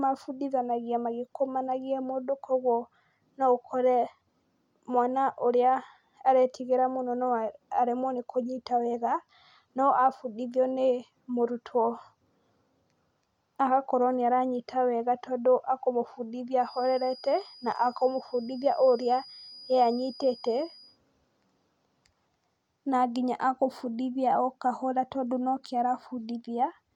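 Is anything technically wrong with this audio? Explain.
Yes. From 16.57 to 21.00 s a thin, steady feedback whistle near 4.9 kHz sits about 25 dB below the speech, swelling and fading slowly in level. The likely cause is a loudspeaker-to-microphone loop held just at the edge of feedback, sustaining one tone without building up.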